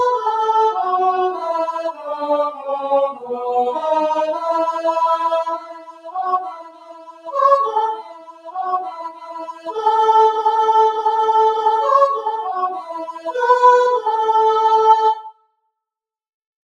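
A noise suppressor applied to music or sounds runs through the whole clip. A processor built for speech treats sustained material and ambience as noise, so the level swings by roughly 15 dB as the sound sustains and fades, giving a pumping, thinning character. Sound is cut by the noise suppressor at 1.9–2.16 s, 2.51–2.68 s, 3.11–3.3 s, 5.56–7.35 s, 7.95–9.76 s, 12.73–13.34 s and 15.15–15.7 s, with drops of about 9 to 20 dB. The deepest cuts fall in the long stretches from 5.56 s and 7.95 s and at 15.15 s, where held sound sinks and its decay is shortened.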